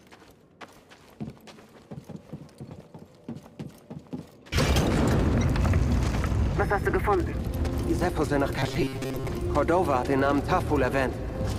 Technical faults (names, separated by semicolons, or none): robotic sound from repeated short buffers